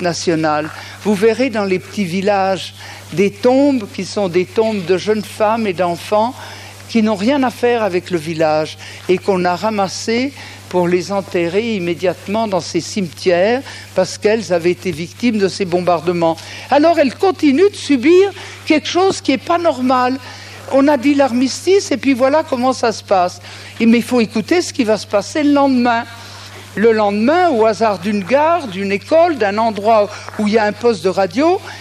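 No technical faults can be heard anywhere in the audio.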